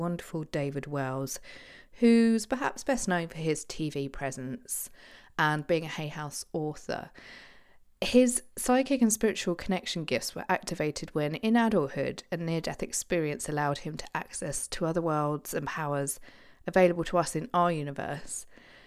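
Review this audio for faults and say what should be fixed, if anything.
Nothing stood out on listening, so there is nothing here that needs fixing.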